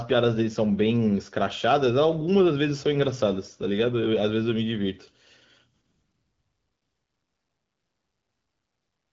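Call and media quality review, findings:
No findings for this call and media quality review; the speech comes through the AMR-WB (HD Voice) path at 12.65 kbit/s as expected.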